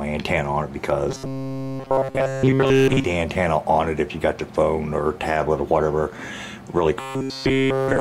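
Robotic sound from repeated short buffers appears from 1.1 to 3.04 s and from 7.0 to 8.0 s. A rigid 134 Hz buzz entirely replaces the audio, likely from looping a buffer of about 7.5 ms.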